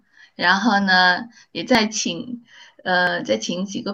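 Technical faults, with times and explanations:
0.44 s, 1.75 s and 3.07 s, dropped buffer (overrun): at each point the speech jumps forward, skipping a few tens of milliseconds at most, roughly 10 ms at the first, 30 ms at the second and 20 ms at the third. There is no gap of silence; the audio either side of each loss is butted together, and that sudden discontinuity in the waveform is heard as the jump. The likely cause is the capture software failing to read its buffers before the hardware overwrote them.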